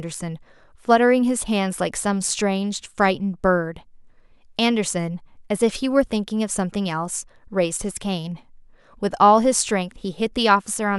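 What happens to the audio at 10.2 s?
At 10.2 s the speech carries on cleanly, with no dropout, click, distortion or other fault at that moment.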